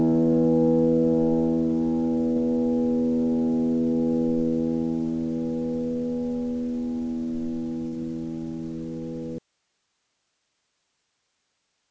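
A recording of everyday sounds carried over a call link, with nothing above 8 kHz, which fits a wideband G.722 call codec. Two short concealed packet losses occur, at 2.32–2.39 s and 7.88–7.95 s. Each time about 40 ms of audio never arrived and the receiver filled it by extending the preceding sound before blending back, so each one is heard as a brief smear or wobble. On a spectrogram each shows as a thin vertical band where the texture goes smooth and repetitive, with a slight seam at either edge. From 9.38 s to the end the audio drops out to a faint residue: the sound stops abruptly and only hiss about 50 dB down remains. The cause is likely a lost source feeding a path that stayed live. The waveform collapses to a flat noise floor at that instant, and the spectrogram turns to uniform faint speckle with no fade.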